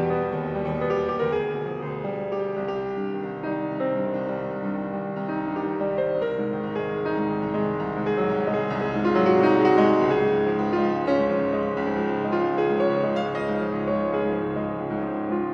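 Nothing stood out on listening; no technical faults can be heard anywhere in the audio.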